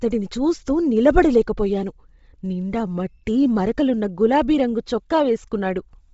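Speech throughout, with a breathy, grainy top and nothing above 7.7 kHz, likely heavy Bluetooth LC3 compression at a low bitrate, something like 24 kbps.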